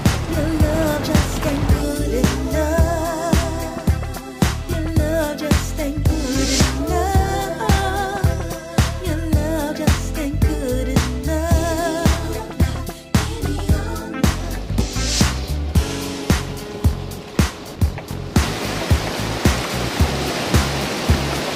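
Compressed frames skipped at 14.79 to 14.84 s and again at 17.75 to 17.80 s: each time, a short run of 20 ms frames was never decoded, either missing or rejected as damaged. The audio leaps forward by roughly a tenth of a second, dropping that stretch entirely.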